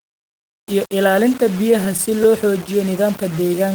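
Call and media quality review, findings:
Low bit depth without dither, whole clip: grainy, signal-following distortion on the speech, quiet tails gritty or sputtering. Error sits roughly 20 dB under the signal, pointing to about 5-bit rounding. Likely cause: requantisation in the capture or conversion path. Unlike hiss, the grit stops when the sound stops.

Repeated stalls (stutter), 1.45–2.34 s: eight short hitches, longest 11 ms, 77 ms filled in total, about 9% of the span. Jitter buffer ran dry and the receiver held the last sound. Nothing lost, unlike packet loss: drag, no dropouts.

Jitter buffer slow-down, 3.28–3.67 s: speech stretched to 88% speed, 51 ms added, pitch unchanged. Receiver repeated pitch periods to rebuild its reserve. Unlike stutter, a smooth, continuous drawl without breaks. Unlike a resampling error, no pitch drop.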